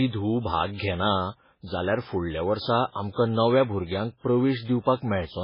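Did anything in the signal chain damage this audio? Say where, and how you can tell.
Yes, at the codec stage: likely heavy MP3 compression, starved of bits, cuts everything above 5.3 kHz throughout, fitting about 16 kbps, leaving the speech dull and watery.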